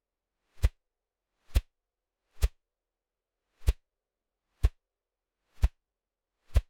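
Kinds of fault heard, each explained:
Damaged data in a compressed stream: corrupted bytes in the encoded audio make the decoder misread frames and lose sync until it finds the next valid frame header. Here it causes two brief glitches, from 1.49 to 1.51 s and at 4.63 s.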